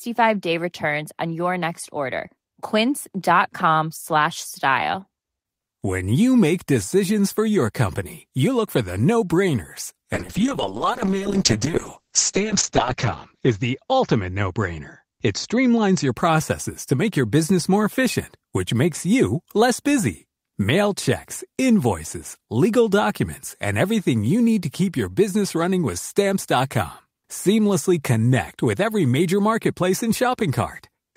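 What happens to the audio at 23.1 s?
Nothing goes wrong at 23.1 s; the speech continues intact through that moment with no audible fault.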